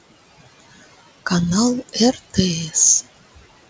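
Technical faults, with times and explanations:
Throughout: noise suppressor artifacts. The room noise sinks about 18 dB between phrases and swells back under speech.
2.13–2.37 s: speech cut by the noise suppressor. Roughly a tenth of a second of speech is turned down as much as about 11 dB, sounding faint and swallowed, not silenced.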